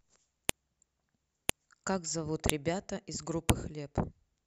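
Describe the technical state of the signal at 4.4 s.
Around 4.4 s the speech signal is intact, with no technical fault present at that moment.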